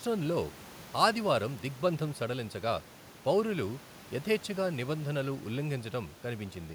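Speech recording with no technical faults; the only background is the room's own noise, sitting about 22 dB below the voice, which belongs to the recording space rather than the system.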